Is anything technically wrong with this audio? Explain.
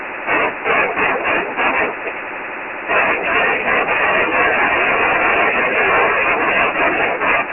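Yes. Throughout the speech, the audio was stored as Dialogic VOX ADPCM, 4-bit adaptive coding at a rate that fits 24 kbps and 6,000 samples a second. Nothing survives above 2.9 kHz, the low end thins below 250 Hz, and heavy coding damage leaves a gritty hiss trailing the speech.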